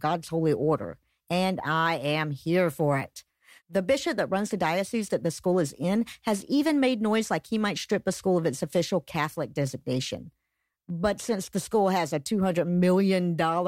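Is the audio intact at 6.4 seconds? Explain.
No. At 6.4 seconds you're inside a stretch of sample clock jitter that runs from 1.62 s to the end of the clip. The converter's clock wobbles by around a microsecond, so each sample lands a touch early or late, and that timing error turns into noise that scales with how steeply the speech waveform is changing. It sits roughly 45 dB below the signal, a faint hiss and roughness riding on louder, brighter syllables that drops away in the pauses.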